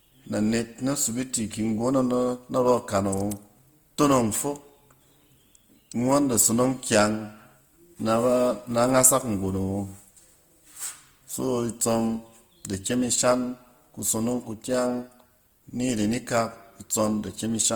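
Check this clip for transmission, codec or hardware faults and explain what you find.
One codec fault runs through the whole recording. The speech sounds grainy and rough, with a noisy, hashy texture in place of clean tone, while the bandwidth stays full, reaching up to about 20.1 kHz. This is likely Opus compression in its CELT music mode, at a rate consistent with roughly 24 kbps, where bands starved of bits are refilled with folded or noise content rather than left empty.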